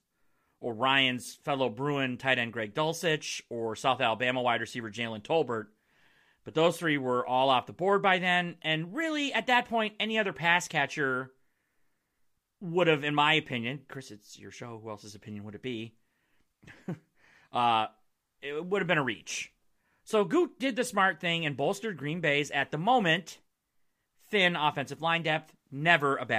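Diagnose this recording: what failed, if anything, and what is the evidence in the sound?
Nothing here failed that I can hear: the speech holds steady all the way along, with no stage in the chain giving anything away.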